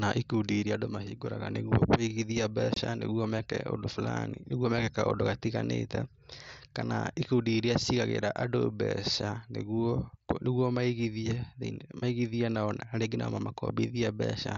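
At 2.74 to 2.77 s, just before "meke ũndũ", unconcealed Bluetooth headset packet loss cuts a 22.5 ms hole with abrupt edges, which fits three lost mSBC frames. The waveform breaks between hard edges, and the spectrogram shows a vertical gap.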